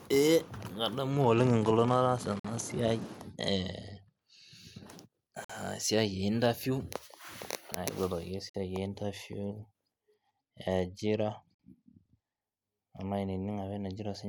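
A speech recording with a Bluetooth SBC bit pool drop from 1.1 to 4.2 s and again from 10.1 to 12.4 s. The treble dulls and turns gritty, which fits the bit pool falling from 31 to 14 (near 99 kbps); a spectrogram shows the upper bands thinning out. A gap between chunks cuts 50 ms holes every 3 s, at 2.40, 5.45, 8.50 and 11.55 s, which shows on the waveform as flat, hard-edged silences.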